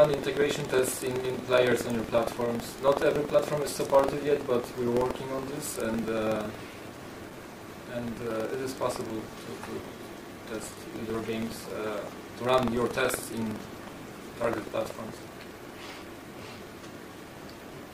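From start to finish, the program filling the ring buffer and the hardware reading it out have drifted out of step with each other, so the two cross inside every period. A small slice of each buffer, around a twentieth, carries audio from roughly a tenth of a second earlier, bounded by hard joins. This is buffer tearing, heard as a steady rattling buzz at 21.5 Hz, which fits a 2048-sample buffer, sounding wherever there is signal.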